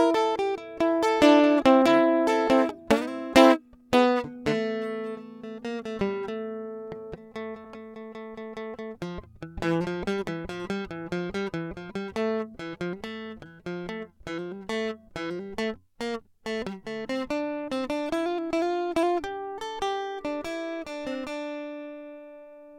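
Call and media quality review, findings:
AAC frame loss with concealment at 7.64 s, music. Decoder lost about 21.3 ms of stream, which fits a single AAC frame, and rebuilt the gap from the last good spectrum with randomised or interpolated content. Audible result: brief smeared, noisy or phasey blip in the music, no dropout to silence.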